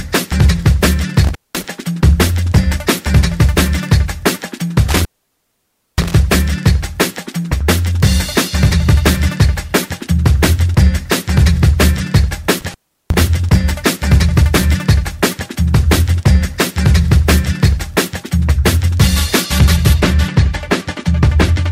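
Three times the audio abruptly drops out, with a burst of crackle as it goes and again as it returns, and only a faint hiss fills the gap. This happens between 1.24 and 1.64 s (silent for about 0.2 s), between 4.88 and 6.15 s (the longest, about 0.93 s), and between 12.61 and 13.20 s (about 0.36 s). This is intermittent contact. A loose plug or cable briefly loses its connection, and the crackle comes from the contact scraping as it opens and closes.

From 20.0 s to the end, the sound turns dull and muffled, as if heard through a blanket, with the treble sloping smoothly away rather than cutting off at one point. The loss reaches about 10 dB at 10 kHz relative to 1 kHz. This is de-emphasis applied wrongly: a high-frequency cut meant to reverse a matching treble boost was applied to audio that never had that boost, or applied a second time, so it removes treble that belonged in the signal.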